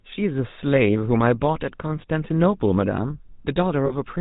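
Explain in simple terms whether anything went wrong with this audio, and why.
Two things went wrong here. The whole clip has gone through the GSM full-rate codec, the old mobile-phone speech coder. It rebuilds the voice from a rough model of the throat and mouth, driven by coarse, evenly spaced pulses, and drops everything above 4 kHz. That's why the speech sounds muffled and has that plainly audible buzzy, gravelly edge from start to finish, like a call on an early cell phone.

Then there are lost GSM frames from about 3.86 to 3.92 s, a gap of 40 ms, which fits two 20 ms frames going missing. When frames don't arrive, the decoder fills in by repeating the last good one. So instead of a clean dropout you hear a short, rough, metallic ring where the sound should be. It's brief, and it comes near the end.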